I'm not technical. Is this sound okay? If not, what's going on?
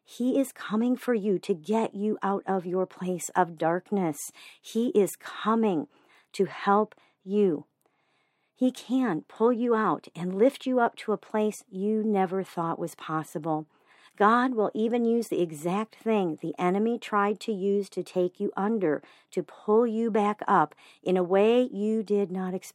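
Yes, nothing is wrong with this recording.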